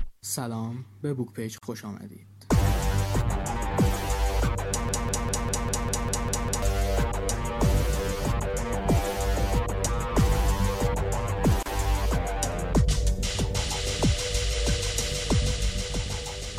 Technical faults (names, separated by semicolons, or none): gap at a join of encoded pieces; broken-record loop